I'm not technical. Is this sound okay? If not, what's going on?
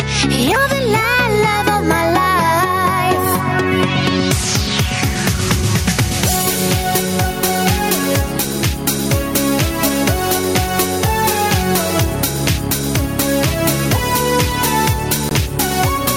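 No. Gain pumping runs through the whole clip: the level is pulled down under each loud sound, so the level seems to breathe. Loud and soft parts sit closer together than they should. The likely cause is a microphone gain set far too high, with an automatic level control pulling it back down every time something loud arrives.

A Bluetooth dropout occurs at 15.29 to 15.32 seconds: the sound cuts out for about 21 milliseconds, a brief hole, and then resumes a little further along, as though it had carried on playing during the gap. This is likely a wireless link to headphones failing to deliver audio in time, and the short length fits a single lost packet being skipped.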